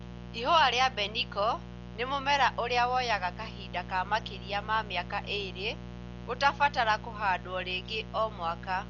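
A steady, raspy buzz sits under the speech from start to finish, fairly loud at roughly 15 dB below the talker. This is mains buzz: sharp switching spikes on a 60 Hz supply leak into the signal path and spread harmonics well up into the kilohertz range. The speech itself also sounds dull and boxed-in, with nothing above 6.9 kHz and a rough, fluttering noise clinging to voiced sounds throughout, most likely from heavy Dolby Digital compression at a very low bitrate, around 40 kbps. At that rate the encoder narrows the band and leaves many frequency lines without detail, which the decoder fills with noise.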